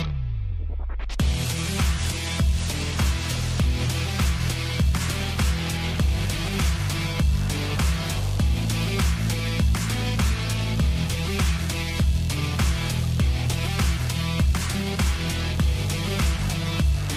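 No technical faults can be heard anywhere in the audio.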